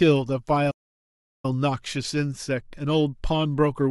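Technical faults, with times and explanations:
0.70 to 1.45 s, playback stall: the speech cuts out mid-flow and there's dead silence for about 730 ms, then it picks up again. That's a long, clean gap rather than a click or dropout, which is what you get when the player has nothing to send to the output. The likely cause is that it ran dry of buffered data, or its playback thread got blocked, and it simply went quiet until it caught up.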